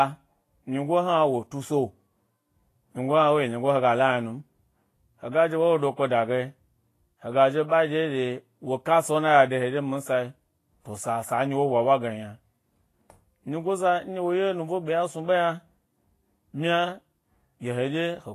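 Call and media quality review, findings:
Vorbis compression, throughout. Plainly audible codec damage: hissy, grainy treble, roughened speech tones, smeared consonant attacks, nothing above 14.2 kHz. Likely a Vorbis encoder starved of bits, consistent with a low bitrate near 30 kbps, filling coarsely quantised treble with noise.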